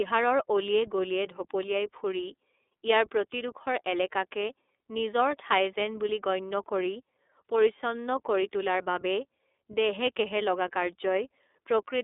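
From start to finish the speech runs through the iLBC codec, a narrowband VoIP coder. The band is confined to roughly 300 Hz to 3.6 kHz, so the speech loses its low body and all its air and sibilant detail. Each frame's excitation is coded independently, in frames that sound like iLBC's 30 ms mode at 13.33 kbps, which leaves a plainly audible rough, buzzy, synthetic grain on the speech throughout.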